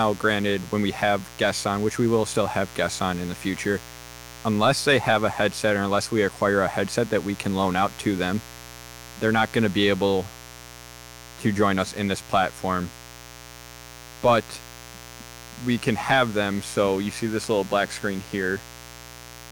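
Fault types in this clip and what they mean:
Mains buzz: A steady, raspy buzz runs under the speech for the whole clip, sitting about 20 dB below it. Sharp switching spikes from 60 Hz mains power leak into the signal twice per cycle. Their harmonics stretch up to several kHz, which gives the buzz its rasp.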